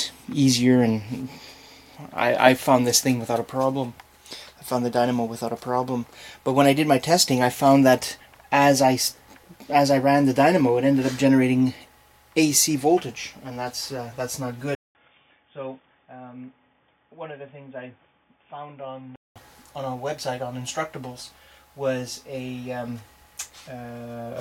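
At 14.75 s, a 200 ms gap, then dull, boxy sound cut off above 3.6 kHz, about 10 dB quieter, with faint new background noise. Likely an input switched to a poorer device. Clear again at 19.36 s.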